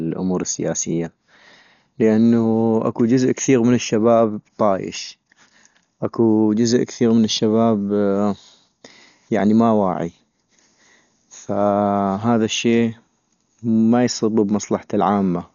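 Throughout the speech, nothing sounds above 7 kHz, and tones carry a rough, fluttering noise fill, likely Dolby Digital compression at a starved bitrate near 48 kbps, unlike a clean low-pass.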